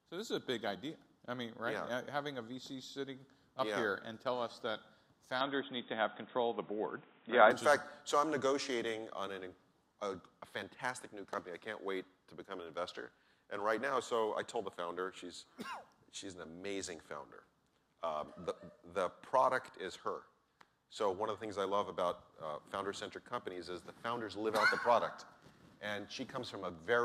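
From 5.41 to 7.51 s the audio loses everything above 3.8 kHz, shifts level and gains background noise, likely an input switched to a poorer device.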